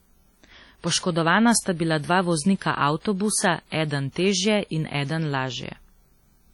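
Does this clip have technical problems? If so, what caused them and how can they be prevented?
Yes. Heavy WMA compression damage runs through the whole speech clip, likely from a low-bitrate encode, around 32 kbps. Long transform blocks smear quantisation noise into a washy, ringing haze that breathes with the signal. To prevent it, encode at a higher bitrate.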